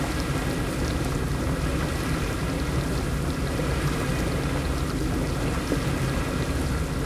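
No technical faults are audible.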